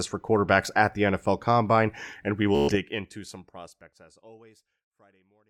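At 2.55 s the speech breaks into a Bluetooth stutter that runs to 2.76 s. Packets went missing or showed up late, so the receiver kept replaying its last short buffer, and you hear a quick machine-gun buzz instead of the voice. About 126 ms of audio is simply gone, and the speech picks up later as if it had kept going underneath, all while the smooth fade-out that starts around two and a half seconds carries on.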